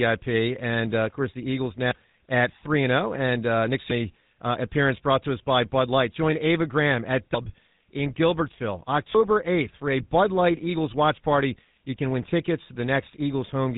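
A buzzy, gravelly roughness runs through the whole speech recording, with nothing above about 3.9 kHz. This is GSM full-rate codec damage, which fits a 13 kbps stream: the codec rebuilds the voice from a vocal-tract model excited by sparse, evenly spaced pulses.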